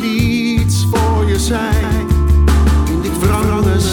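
From 1.83 s to the end, the audio carries a doubled audio track: a second, roughly 5 dB quieter full-band copy trails the original by around 200 ms, entering abruptly and adding no decay or room colour. It is likely a second capture through a slower path or an edit holding two offset copies.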